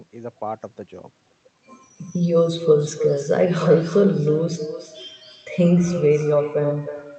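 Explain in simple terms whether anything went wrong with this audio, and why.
Something did go wrong: an echo with no canceller runs through the whole clip. The other end plays the call out loud, their microphone catches it, and every bit of speech comes back about a third of a second later as a quieter, hollower copy.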